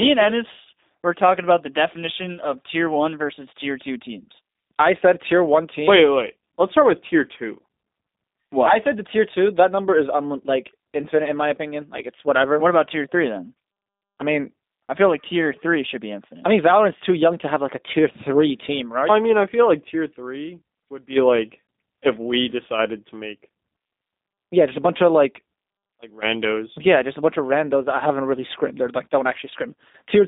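From start to finish, the speech carries the signature of the G.729 codec. Nothing above 3.7 kHz survives, and little below 200 Hz. Beyond that narrow line band, the voice is rebuilt from a vocal tract model, a pitch predictor and a few sparse pulses per frame, which fits an 8 kbit/s stream. That model gives a plainly audible rough, slightly synthetic buzz. A simple telephone band-pass filter would sound muffled but stay natural.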